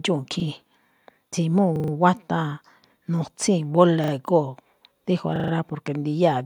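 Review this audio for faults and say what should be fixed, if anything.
Repeated buffer stutters occur at 0.40–0.44 s, 1.76–1.92 s, 4.04–4.12 s and 5.36–5.52 s. Each time, a short piece of speech plays again with a hard join at every repeat. The piece lasts about 40 ms, which fits a 40 ms buffer. It sounds twice at 0.40 s, three times at 4.04 s, and five times at 1.76 s and 5.36 s. New audio arrived late, so the device replayed the last buffer. Little or no speech is lost. Enlarging the playback buffer or fixing the late delivery upstream would prevent it.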